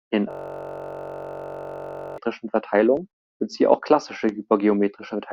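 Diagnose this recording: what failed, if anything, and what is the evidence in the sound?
From 0.31 s to 2.18 s the speech stops and is replaced by a steady, hard-edged buzz at about 46.9 Hz. That is one 21.33 ms slice of audio repeating exactly, close to ninety times over. This is a system hang loop at the driver or buffer stage. The host or driver froze while the audio hardware kept replaying the same ring buffer. The loop length fits a 1024-sample buffer, short enough that the repetition fuses into a tone.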